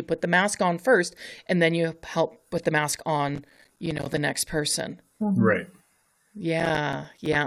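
Processor overload crackle appears from 3.29 to 4.17 s, between "help put the mask" and "next person", and again from 6.60 to 7.35 s. Very short buffers of a few milliseconds each miss their deadlines repeatedly. Each miss becomes a hard-edged silent gap, and the gaps together sound like gritty tearing across the speech.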